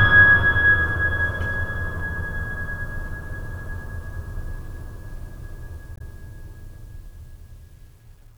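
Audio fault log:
5.94–6.01 s, damaged data in a compressed stream: for about 66 ms the music is broken up, as the decoder meets corrupted bytes, misreads the frames there and hunts for the next valid frame header before regaining sync.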